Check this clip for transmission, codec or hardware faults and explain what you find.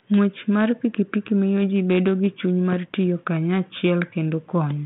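Nothing here points to a transmission, codec or hardware problem: the speech comes through a 32 kbit/s G.726 link working as it should, with the expected telephone band of roughly 150 Hz to 3.5 kHz and only the light coding texture that rate leaves behind.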